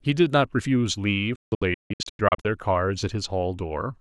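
From 1.36 to 2.45 s the speech breaks up with a digital broadcast dropout: the receiver muted whenever frames arrived corrupted, leaving several silent holes totalling about 672 ms, the longest 160 ms, each cut with a 3 ms fade. The waveform shows flat gaps, and the spectrogram shows full-band blank columns.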